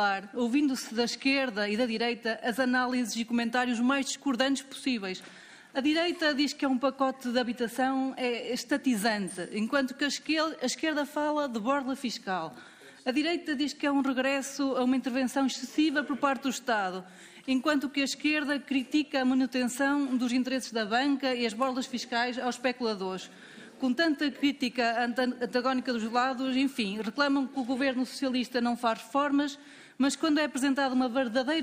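Nothing in the audio stood out as a technical problem on listening.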